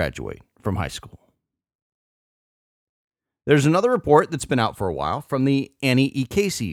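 No technical faults are audible.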